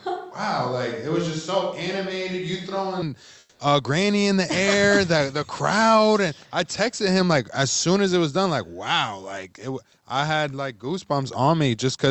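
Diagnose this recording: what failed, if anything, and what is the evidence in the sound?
Until 3.02 s the speech is roomy, hollow and about 5 dB quieter, with raised room noise: likely a switch to a distant microphone at capture.

From 3.39 to 3.59 s the background goes flat, featureless and about 3 dB quieter: likely comfort noise in place of the background, from Opus DTX.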